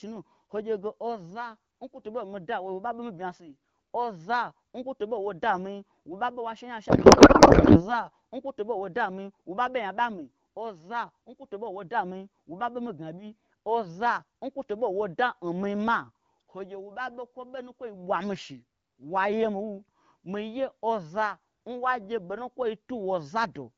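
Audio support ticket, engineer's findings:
Codec payload misread, 6.89 to 7.97 s, between "she nya" and "nkwo toɓo". Speech replaced by garbled noise and warble that barely tracks it. Probable component: AMR-WB depacketiser. Octet-aligned frames parsed as bandwidth-efficient, so bits land in wrong fields. Surrounding audio shows light AMR-WB coding, consistent with 12.65 kbit/s.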